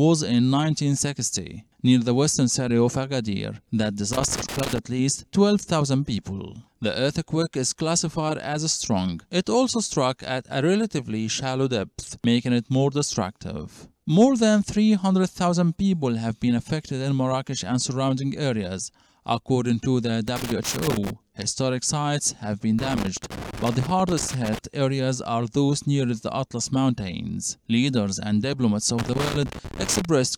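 Loose connector crackle breaks in four times: from 4.13 to 4.78 s, 20.28 to 21.10 s, 22.79 to 24.59 s, and 28.99 to 30.05 s. A worn or dirty contact is making and losing connection as it shifts, chopping the signal into irregular scratchy bursts. On the waveform these show as ragged dropouts and sharp spikes. On a spectrogram they appear as scattered broadband vertical streaks across the full frequency range.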